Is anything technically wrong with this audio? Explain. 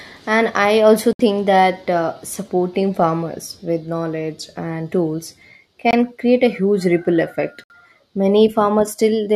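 Yes. Corrupt frame muted: silent holes start abruptly at 1.13–1.21 s, 5.91–5.94 s and 7.64–7.72 s, where the decoder rejected damaged frames. Unlike a skip, timing continues unbroken across each gap.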